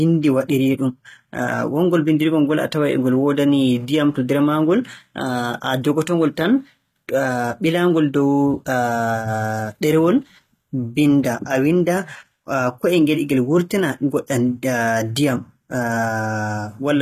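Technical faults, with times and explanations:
Throughout: HE-AAC compression. Sibilants sound gritty and metallic, with no content above 14.9 kHz, which fits a low bitrate near 20 kbps. The treble is likely rebuilt by band replication from copied lower bands, so its harmonics misalign with the speech below the crossover.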